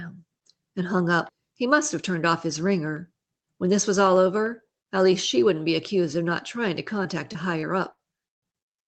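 From 7.03 to 8.68 s, just after "of not trying to", repeated packet loss leaves seven gaps up to 77 ms, patched by repeating sound. The result is choppy and robotic, unlike a single dropout.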